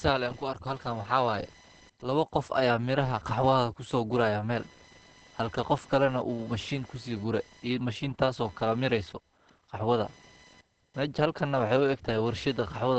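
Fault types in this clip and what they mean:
Computer activity noise: Load changes in the computer disturb the shared ground of the audio circuit. This puts a buzzy, chirping pulse train, repeating at around 1 kHz and roughly 30 dB below the speech, under the whole clip.
Opus compression: The likely cause is an Opus encoder in its SILK speech mode at a low rate, one that fits about 16 kbps. The speech sounds muffled and hoarse throughout, with plainly audible coding damage and nothing above 8.4 kHz.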